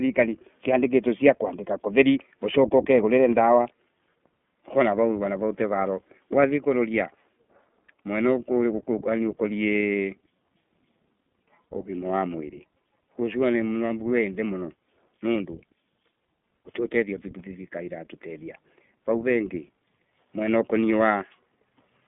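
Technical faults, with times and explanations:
Throughout, iLBC codec: narrowband coding of independent 20 ms frames removes everything above 3.7 kHz, leaving the speech muffled, rough and plainly synthetic.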